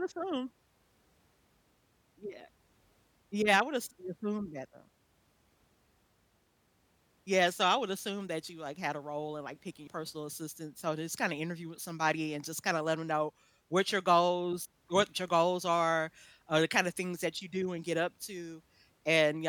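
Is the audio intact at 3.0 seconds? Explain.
Yes, the speech at 3.0 seconds plays through intact, with no audible fault at that moment.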